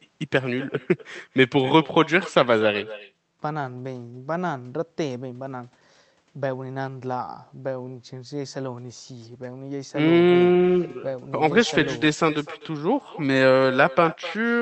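All the way through the clip there's echo with no canceller: the far end's speaker is bleeding back into its mic, so every phrase returns about a third of a second later, roughly 18 dB down and thin, over call audio that tops out near 8 kHz.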